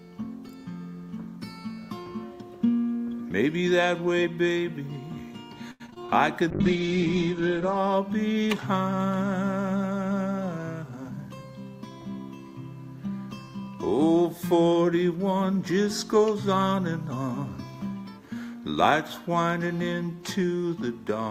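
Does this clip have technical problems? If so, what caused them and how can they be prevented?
Yes. Repeated packet loss (robotic sound) runs from 5.71 to 6.10 s: five gaps, the longest 86 ms, were patched by extending the previous audio, covering about 44% of that stretch and making it choppy with pieces missing. Prevent it with a steadier network path and stronger forward error correction.

A call bitrate drop follows from 6.52 to 7.84 s. The bitrate fell from 64 to 9 kbps, and the bandwidth shrank from 20 kHz to 8 kHz, so the sound turns muffled and coarse. Prevent it by keeping enough uplink headroom that the bandwidth estimate doesn't collapse.

A jitter buffer speed-up from 10.52 to 11.30 s plays the audio at 109% speed with the pitch unchanged. Around 70 ms was trimmed in small pitch-period slices, so it sounds hurried. Prevent it by reducing delay spikes that let the buffer overfill.

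Dropped samples show up at 20.05 s as a single sharp click, likely from a sample-level gap where the waveform jumps ahead. Prevent it with properly sized, glitch-free audio buffering on the capture and playback side.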